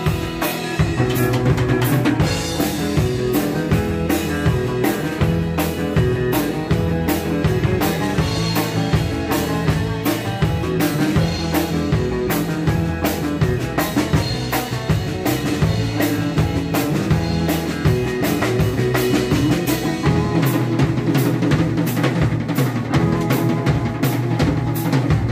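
Nothing technically wrong can be heard anywhere in this audio.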